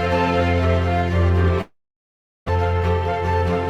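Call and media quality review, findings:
Long network dropout, 1.61 to 2.50 s: concealment buzz fades to near-silence, about 0.6 s of audio never comes back. Likely packet loss on the network path.

Jitter buffer speed-up, 2.58 to 3.68 s: runs about 16% fast at the same pitch, sounds rushed. Receiver trims pitch periods to shed roughly 0.2 s of backlog.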